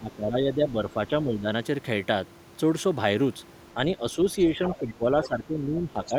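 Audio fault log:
0.00–1.48 s, 3.74–3.78 s and 4.52 s to the end: speech suppressed in double talk. The talker's level sinks by around 10 dB in the first and last stretches, for roughly a second and most of the final stretch respectively, and by only a few dB in the brief middle dip. The likely cause is an echo canceller that could not tell the near talker from loudspeaker echo while both sides spoke, so it turned the whole microphone signal down.
4.68–4.76 s and 5.23–5.28 s: other side's voice leaking through. Two short scraps of a second voice surface inside the final suppressed stretch, sitting about 15 dB below the talker. They are brief and fragmentary rather than continuous. This is likely residual echo: the far end, played on the talker's loudspeaker, was picked up by the microphone, and the echo canceller failed to remove all of it during double talk.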